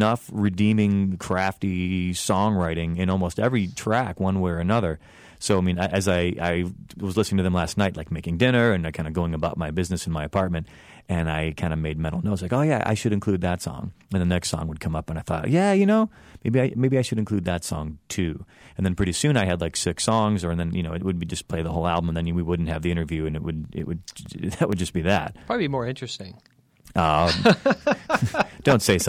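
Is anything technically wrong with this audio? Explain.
Yes. There are CD scratch ticks from 23.64 to 24.88 s in the speech, after "the interview and it" and before "be that". A scratch causes unrecoverable data once per disc turn. The player patches or mutes it. Nine short ticks, the longest about 3 ms, repeat about seven times a second, with uneven strength.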